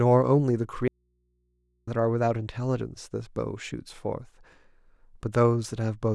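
A break in the signal path, likely a lost connection upstream while the input stayed live, causes an audio dropout to a faint residue in this speech clip from 0.88 to 1.87 s. For about a second the speech cuts out abruptly, leaving only mains hum roughly 45 dB below the speech.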